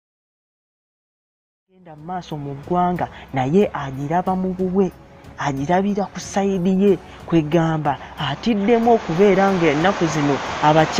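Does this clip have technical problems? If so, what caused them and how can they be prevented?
No, this clip has no technical problems, so there is nothing to prevent.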